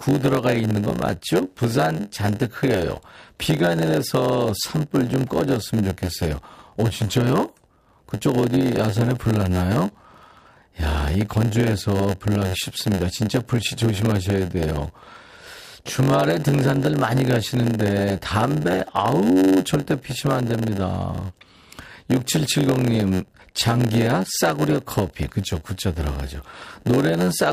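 Throughout the speech, a block size mismatch (padded) zero-fills each block's tail, giving a steady 91.9 Hz buzz and 0.919× speed at unchanged timbre, unlike a resampling slowdown.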